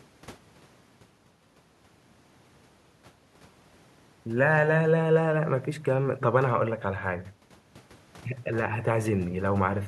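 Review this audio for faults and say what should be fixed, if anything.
No faults can be heard in this speech recording. Nothing needs to be fixed.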